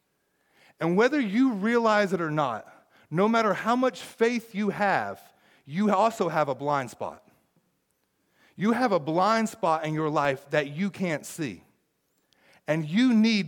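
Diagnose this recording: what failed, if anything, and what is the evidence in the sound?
Driver or buffer stage: a block of digital silence at 10.25 s, between "blind spot in your" and "that you can't see", is about 2.7 ms long, fitting a 128-sample buffer left unfilled, and is heard as a single tick.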